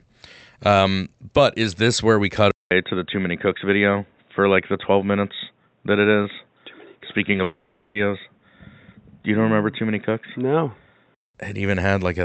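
At 2.51 s, just after "this where we cut", there is a gap of 200 ms, and then the sound turns dull and boxy. Nothing remains above 3.8 kHz, and a new noise floor sits roughly 45 dB down at much the same level. This is most likely an input switched to a poorer device, which holds until 11.35 s.

Two short concealed packet losses fall inside that stretch, at 7.33 to 7.35 s and 7.37 to 7.39 s. In each, about 10 ms of audio never arrived. The receiver extended the preceding sound to cover the hole, which leaves two quick smears or wobbles.

From 7.43 to 7.96 s comes what is likely a long network dropout. For 520 ms the receiver keeps synthesizing a fading continuation of the last sound, with no true silence. The real audio then resumes, and the missing portion is simply gone. The Opus call path at 48 kbps would pass up to 8 kHz, so the 3.8 kHz ceiling comes from the input, not the codec.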